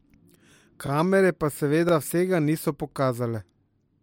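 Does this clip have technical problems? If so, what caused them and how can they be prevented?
Yes. The speech stutters at 1.89 to 1.91 s and again at 2.91 to 2.94 s, one second apart. These are overlapping chunks: the audio was handled in 1.0 s chunks, each starting about 23 ms before the previous one ended, so that stretch plays twice at each join. To prevent this, check that each chunk's start position follows exactly from the previous chunk's end.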